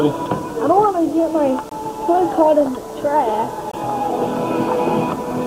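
Short holes break the sound at 1.69 to 1.71 s and again at 3.71 to 3.74 s, each about 21 ms long and spaced 2.0 s apart. This is a gap between chunks: the audio was delivered in 2-second pieces, and silence was inserted at each join.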